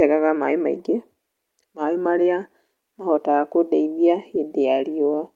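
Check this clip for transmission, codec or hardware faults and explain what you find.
Two related faults show up, both about timing.

Clock drift between sender and receiver runs through the whole clip. The sender's clock is about 4% slow, so the receiver's buffer keeps running short and the speech feels slightly unsteady.

Repeated timing corrections run from 0.26 to 5.17 s. The receiver keeps repeating tiny slices to fill the gap, adding roughly a fifth of a second. You hear the speech about 4% slow, with faint hiccups.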